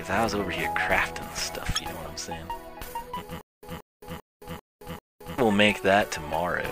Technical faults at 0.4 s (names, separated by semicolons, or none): none